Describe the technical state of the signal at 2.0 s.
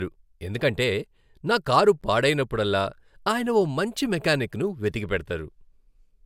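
Right around 2.01 s there's a gap at a join of encoded pieces: the speech just drops out for about 12 ms and then picks up exactly where it left off. It sounds like a tiny tick of silence, its edges smeared by the codec. What's going on is that two separately encoded chunks were butted together untrimmed, so the encoder's start-up delay and last-frame padding are both still sitting in the join.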